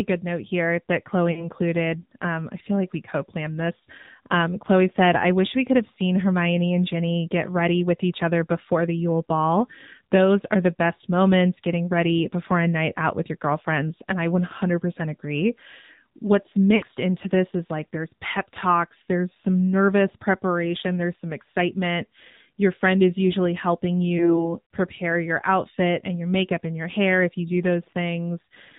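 AMR narrowband mobile codec runs through the whole clip. Everything is squeezed into a telephone band with nothing above 4 kHz, and each short stretch of speech is rebuilt from a vocal-tract model driven by a handful of pulses rather than carried as a waveform. At this quality the damage is plainly audible: a buzzy, synthetic edge that points to a low AMR-NB mode, around 7.4 kbps.

Lost AMR speech frames occur at 1.32 to 1.48 s, 16.76 to 16.84 s and 24.18 to 24.48 s, covering about 40 ms, 60 ms and 20 ms of missing audio. In each case the decoder had no valid data, so it repeated its last good pitch and vocal-tract settings at falling gain. The result is a brief smeared warble or dip, after which the speech returns weak or rough for a moment.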